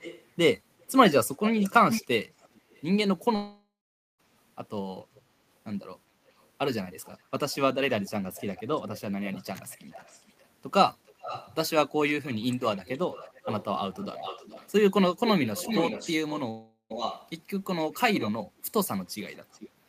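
Speech carrying an echo leak at 0.0–2.83, 5.15–5.21, 6.30–6.46, 7.04–10.46, 11.06–11.55, 12.22–18.31 and 19.05–19.69 s. A distinct copy trails the voice by about 0.4 s, drifting to 0.43 s, and ranges from faint to fairly strong. It is a separate repeat rather than a room-reverb smear, likely from a far-end echo canceller letting loudspeaker pickup through. A long network dropout at 3.35–4.21 s (0.84 s lost) and 16.51–16.92 s (0.4 s lost) differs from brief packet-loss clicks: the last sound is stretched into a fading buzz, then silence, and the audio resumes later with the gap missing, likely lost packets.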